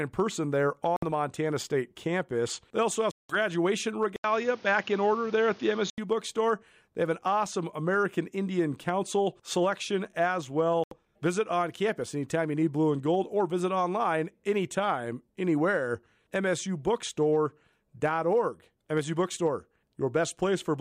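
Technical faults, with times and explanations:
0.96 s, 3.11 s and 10.84 s, Bluetooth dropout: the sound cuts to silence for about 0.06 s, 0.18 s and 0.08 s, and then picks up further along as though it had kept playing underneath. This is most likely packets failing to reach the headphones in time and being discarded, with the longest gap fitting roughly a dozen lost packets. Unlike a device switch, the tone on either side of each hole is unchanged.
4.16 to 5.98 s, input switched to a poorer device: after a silence of about 80 ms the sound turns dull and boxy, with nothing above 6.9 kHz, and a new noise floor sits about 30 dB under the signal while loudness stays about the same. The likely cause is the system moving its input to a narrower-band microphone or a headset call profile and then back. Unlike a dropout, the sound keeps going but changes colour for nearly 2 s.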